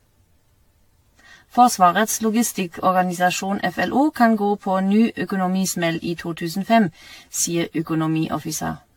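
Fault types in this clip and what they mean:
Generation loss: The speech sounds swirly, smeared and hollow throughout, more than a single lossy encode would cause. Consonant attacks blur, and the spectrum is empty above 18.6 kHz. The likely cause is repeated decoding and re-encoding, around ten passes, each quantising on a shifted frame grid so that noise and spectral holes build up. The character fits AAC-LC at about 96 kbit/s.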